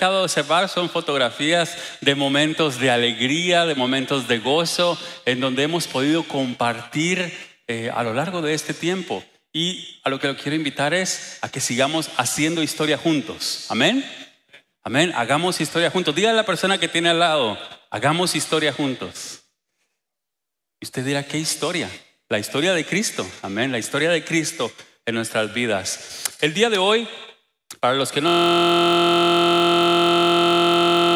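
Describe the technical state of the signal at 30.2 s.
At 30.2 s the signal is caught in a system hang loop that runs from 28.28 s to the end. A 23.22 ms slice, which fits a 1024-sample buffer, replays exactly over a hundred times, producing a steady 43.1 Hz buzz.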